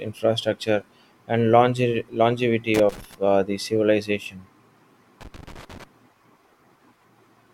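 A worn or dirty contact in a connector is making and breaking as it shifts, chopping the speech signal into an irregular burst of scratchy crackle. This loose connector crackle runs from 2.74 to 3.15 s, just before "uh the civilization", and again from 5.21 to 5.84 s.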